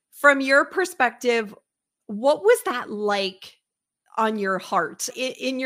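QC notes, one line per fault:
No fault found.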